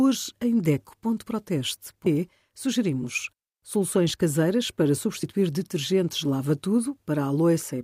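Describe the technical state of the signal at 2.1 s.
At about 2.06 s there's a quick blip from damaged data in the compressed stream: the decoder hits corrupt bytes, loses frame sync and searches for the next frame header.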